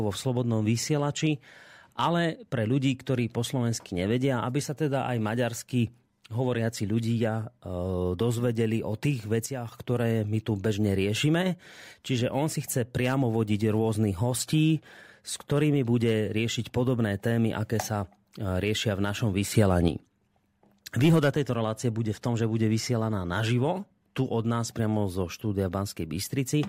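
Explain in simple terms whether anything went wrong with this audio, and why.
The speech and its background noise suddenly drop in level at 9.46 to 9.72 s, then jump up again at 19.54 to 19.88 s. This is a sudden gain jump, likely from volume changed instantly instead of smoothly.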